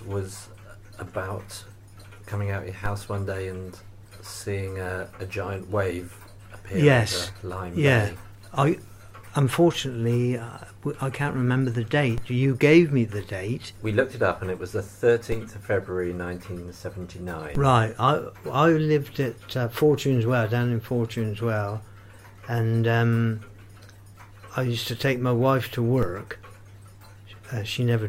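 At 2.86, 12.18, 15.32, 17.55 and 26.03 s the waveform's zero line jumps by about -20 dBFS in a DC step, then decays back through a 5 Hz high-pass. Each jump thumps dully, showing as a vertical broadband line on the spectrogram and a displaced, sagging baseline.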